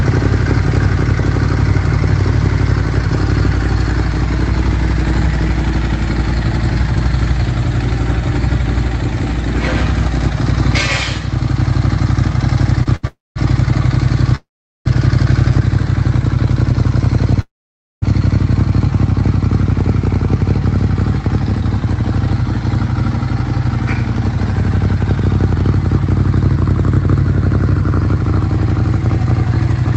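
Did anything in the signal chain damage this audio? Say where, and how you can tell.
Yes, the network and jitter buffer stage. A short stall from a late packet appears at 12.83–12.88 s and 12.96–13.05 s: the last sound is held for 25 ms, then 72 ms, before resuming. Unlike a freeze, nothing decays to silence; a sound simply stretches.

Call audio freezes occur at 13.07–13.38 s, 14.36–14.87 s and 17.41–18.04 s, adding 285, 497 and 610 ms of gap. Each starts as a buzzy continuation that fades, with 200, 400 and 530 ms of silence. The likely cause is packets held in transit while the jitter buffer ran empty.

The jitter buffer speed-up runs from 21.62 to 29.55 s. The audio plays at 102% with unchanged pitch, and about 0.15 s is trimmed overall. The buffer drops pitch-period slices to shed the delay built up earlier, which is why the pitch stays put. A tape-speed error would shift the pitch as well.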